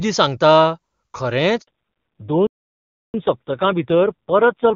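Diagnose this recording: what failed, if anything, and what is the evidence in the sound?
At 1.61 s the speech dies away and stays silent for 60 ms, until 1.67 s. This is a handover gap at the network stage. While the call was switched from one radio link to another, no speech frames were delivered, so the decoder had nothing to play. Everything in that window is missing, and the speech resumes only once the new link is carrying frames.

From 1.67 s to the end, the speech sounds duller and rougher. All energy above 4 kHz is gone, whereas before the gap the wideband HD Voice codec carried clean content up toward 7 kHz, consistent with AMR-WB at its top rate. This is a fallback to narrowband at the codec stage. After the handover, the call was renegotiated onto AMR narrowband, and the roughness points to a low rate around 5.9 kbit/s.

Between 2.47 and 3.14 s, the speech halts mid-flow for about 0.67 s of silence and then continues. 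This is a playback stall at the playback stage, and the gap is long enough to be clearly noticeable. The likely cause is the player's buffer running dry or its output thread being blocked, so no samples reached the output until it recovered and resumed feeding audio.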